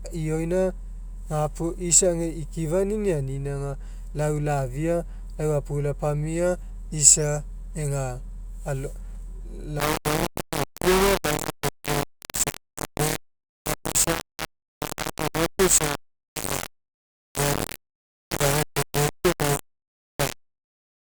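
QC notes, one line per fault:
9.80 to 21.18 s: low bit depth without dither. The speech turns harsh and grainy, with distortion about as loud as the speech itself, and quiet stretches sputter or drop out. This is likely rounding to 4 bits without dither, so the error follows the speech.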